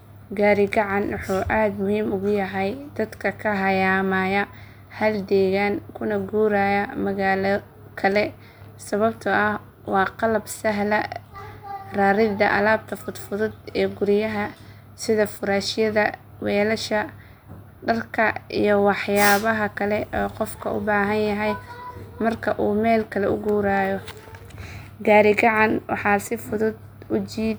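A speech recording with nothing technically wrong to report. No moment in it needs a time or a cause.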